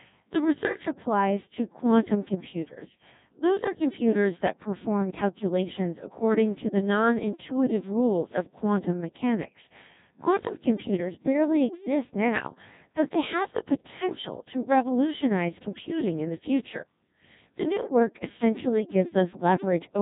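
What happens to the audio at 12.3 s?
At 12.3 s, as throughout the clip, the speech passes through a Codec 2 vocoder, which likely runs at a very low bitrate around 1.6 kbit/s. The decoder rebuilds the voice from sine waves using only pitch, voicing and spectral envelope, so it sounds robotic and buzzy, with nothing above 3.8 kHz.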